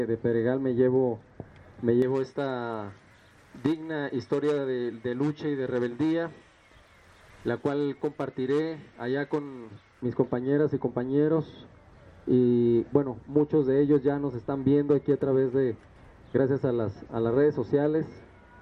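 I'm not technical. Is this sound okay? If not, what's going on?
No. From 2.02 to 10.02 s there is pre-emphasis left on: the treble boost was never undone, so the sound turns thin, overly bright and hissy.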